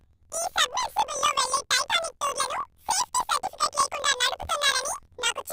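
From start to end, the speech carries a planar audio read as interleaved fault. Each 24 ms block stores all left samples and then all right samples, but playback treats them as alternating pairs, so every block plays twice at double speed, left half then right half. The voice sits an octave high, with a rough 41.7 Hz flutter from the block switching. A spectrogram shows harmonics doubled in spacing and vertical striping every 24 ms; the waveform repeats in short paired bursts.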